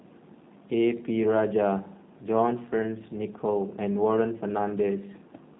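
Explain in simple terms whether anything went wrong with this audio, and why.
G.729 codec damage runs through the whole speech: dull, rough and slightly synthetic, because the voice is rebuilt from a simple model rather than just muffled.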